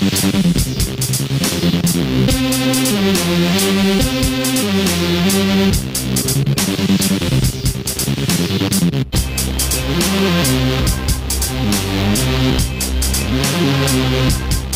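From 12.07 s to the end, crude rate conversion by linear interpolation, which fits a 48 kHz to 44.1 kHz change, adds inharmonic errors around 25 dB down, heard as a gritty buzzing fizz.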